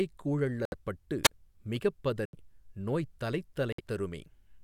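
A speech clip with two kinds of dropout. At 0.65 s, 2.25 s and 3.73 s the sound cuts to silence for 69, 78 and 59 ms and resumes where it stopped. These are likely Bluetooth stalls, where delayed packets let the receiving buffer run empty until retransmissions arrived. At 1.24 to 1.29 s there is a wireless microphone squelch dropout: hiss rises as the FM signal fades, the receiver's squelch mutes the output for about 27 ms, and the speech returns.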